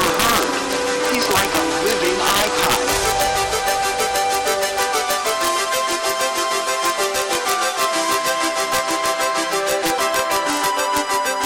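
Throughout the clip, the loudest peaks break into violent, snapping cracks, far harsher than ordinary clipping would give. This is integer overflow: the signal was driven about 5 dB past the top of the integer range, and instead of being held at the limit, those samples wrapped around to the opposite extreme. Only a small fraction of samples, well under one percent, cross the limit, but each one leaps across the full range and produces a sharp crack.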